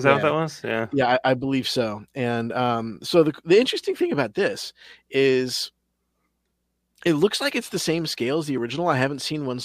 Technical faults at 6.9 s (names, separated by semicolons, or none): none